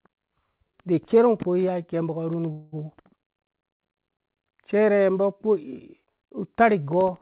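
At 2.52 s the speech stalls in a call audio freeze lasting until 2.74 s: the last sound is stretched into a fading buzz for about 200 ms, then the talker resumes exactly where they stopped, now running about 200 ms late, with nothing lost. The likely cause is packets held up in transit, leaving the jitter buffer empty. On a spectrogram the frozen stretch shows smeared, flat bands fading out. In the waveform the envelope decays smoothly. Throughout, the spectrum stops at 4 kHz, which fits G.711 mu-law at 64 kbps on the call path.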